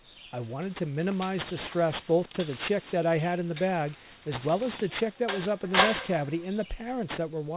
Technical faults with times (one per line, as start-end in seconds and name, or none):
0.00-7.57 aliasing